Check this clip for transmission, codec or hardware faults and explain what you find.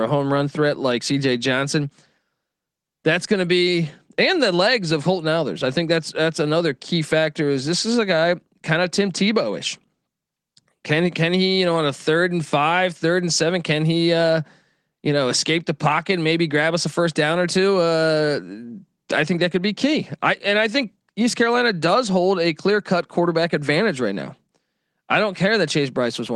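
Nothing stood out on listening to this recording.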